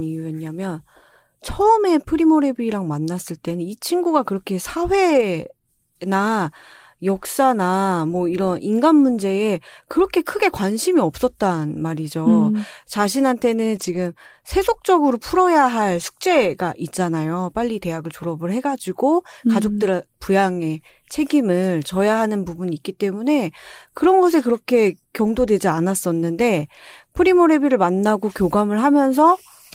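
At 5.09 to 5.23 s, 13.75 to 13.97 s and 25.25 to 25.27 s the speech briefly turns rough and noisy without dropping out. Each is a lost packet rebuilt from error correction: the packets were lost, and the decoder played the low-bitrate copies carried in the following packets instead. The rebuilt stretches last about 80 ms, 120 ms and 20 ms, which fits runs of roughly four, six and one 20 ms packets.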